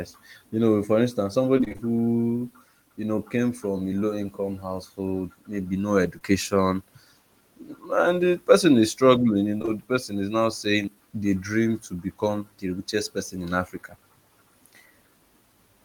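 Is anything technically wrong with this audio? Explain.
Yes, there's packet loss in this speech. From 1.57 to 1.81 s, repeated packet loss gives a choppy, robotic patch: six gaps, each up to 25 ms, patched by stretching the previous sound.

Short concealed packet loss shows up at 6.19, 9.59 to 9.69 s (three back-to-back), and 10.83 to 10.96 s, where the fill smears briefly and adds about 30 ms.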